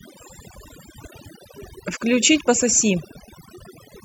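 Overdone noise removal runs throughout. Bands near the noise estimate are cut hard. Quiet speech detail goes too, leaving twinkling near-silence. Compressed frames are skipped at 0.65–0.67 s and again at 2.46 s. Each jump loses roughly 20 ms, which fits a single dropped frame of about 23 ms.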